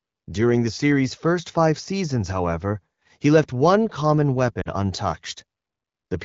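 At about 4.62 s the speech briefly breaks up, and that's lost AMR speech frames. For roughly 40 ms, up to 4.68 s, which fits a couple of 20 ms frames failing their check, the decoder keeps extending the last good pitch and vocal tract settings while pulling the gain down. You hear the voice fade quickly to near silence rather than a hard gap. The voice then returns weak for a moment before the wideband coding's clear, light-touch sound settles back in.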